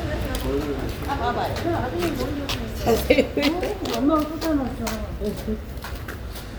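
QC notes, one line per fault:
Nothing to flag here, the audio runs along without any technical trouble worth a line.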